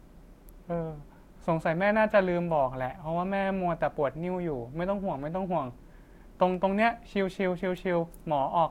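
A sharp, dry snap cuts through the speech at 0.49 s, over almost as soon as it starts and sitting on top of the audio rather than disturbing it. This is an electrical switching spike: the likely cause is a nearby switch, motor or static discharge throwing off a brief arc that the audio line picked up as a burst of interference, leaving a sharp snap layered over the recording.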